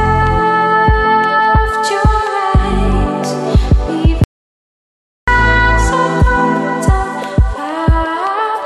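An audio dropout to silence runs from 4.24 s to 5.28 s, about 1.04 s with nothing at all. The sound stops abruptly and resumes mid-flow, the gap holding silence with no room tone. This is likely an input interruption while the recorder kept writing silence.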